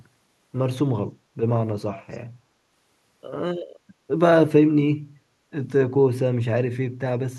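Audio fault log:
1.94–2.18 s, echo leak: a faint, delayed copy of the speech, about 20 dB below it and trailing by 332 ms, surfaces briefly and then drops away. The likely cause is a far-end loudspeaker whose echo canceller let part of the microphone pickup slip back down the line. Room reverberation would fade smoothly from the direct sound. This is a separate repeat arriving a third of a second late, and only for this short stretch.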